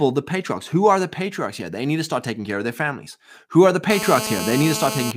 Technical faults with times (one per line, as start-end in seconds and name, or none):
3.90-5.12 GSM phone buzz